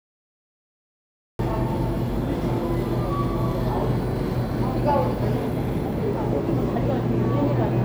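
A cut-off start runs from 0.0 to 1.39 s: the file holds digital silence until 1.39 s, where the sound bursts in mid-event. Capture evidently began late, so there is no attack or fade-in, just an abrupt step from nothing to full signal.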